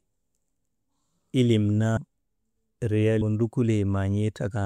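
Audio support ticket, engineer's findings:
Compressed frames skipped at 1.96 s and 3.21 s. The speech jumps ahead by about a fifth of a second, then about half a second, which fits runs of roughly ten and twenty 24 ms frames dropped by the decoder or missing from the file.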